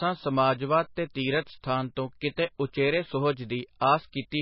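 Short speech clip, heavily squashed all the way through. Nothing comes through above 5.5 kHz, and there's that watery, swirly quality with smeared edges, likely MP3 compression at a very low bitrate, somewhere around 19 kbps. Two attacks also get a pre-echo, at 2.36 s and 3.80 s. A brief hiss creeps in about 18 ms and 16 ms ahead of each attack, because the codec spreads its noise across the whole block and the attack arrives late in it.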